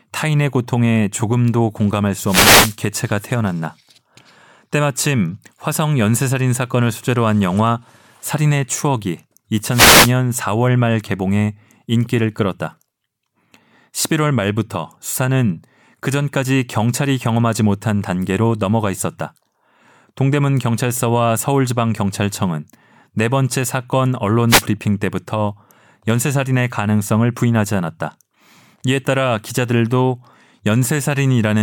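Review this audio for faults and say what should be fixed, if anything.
Wireless microphone noise hits occur at 2.24–2.77 s, 9.69–10.13 s and 24.48–24.63 s: short bursts of static where the FM link fades as reflected signals cancel, letting receiver noise rise over the speech. Use diversity receivers and keep clear line of sight to the antennas.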